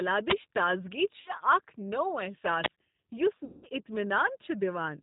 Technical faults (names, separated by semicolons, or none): G.729 codec; VoIP packet loss concealed by the speech codec